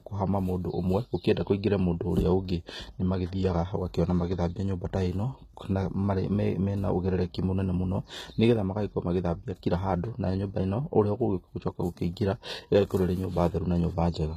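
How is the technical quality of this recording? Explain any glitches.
The technical quality is compromised by plainly audible codec damage across the whole speech clip. Throughout, the upper band sounds gritty and lispy on s sounds, with nothing above about 14.9 kHz. The likely cause is HE-AAC compression, consistent with HE-AAC v2 at roughly 20 kbps. Only the lower spectrum is truly coded, and the treble is rebuilt by copying lower bands upward under a coarse envelope, so its harmonics don't align. Unlike a plain low-pass cut, the top stays bright, but it is synthetic and metallic rather than simply missing.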